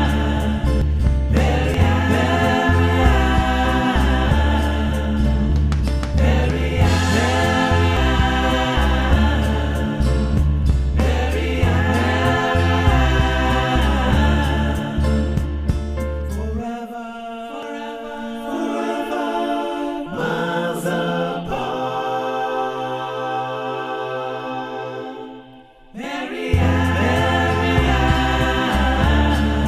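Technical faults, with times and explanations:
0.82, 1.74, 7.97 and 17.63 s: compressed frames skipped. The sound jumps ahead by roughly 300, 200, 200 and 100 ms, which fits whole frames of about 93 ms going unplayed.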